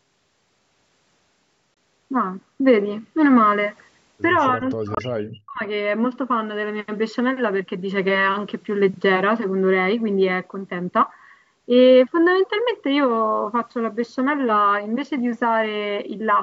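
At 1.74 to 1.78 s the speech cuts to silence for a few tens of milliseconds and resumes as though it had kept playing. This is likely a Bluetooth dropout. The gap fits one lost packet of about 23 ms. The waveform shows a flat hole, and the spectrogram shows a clean vertical blank stripe.

From 4.54 to 5.62 s the speech dips for about a second, falling by as much as around 40 dB. This is likely speech suppressed in double talk, where an echo canceller turned the talker down along with the far end. The waveform shows reduced amplitude. The spectrogram shows energy fading.

Within that stretch, at 4.95 to 4.99 s, what is likely a second Bluetooth dropout of the same length appears as another silent notch.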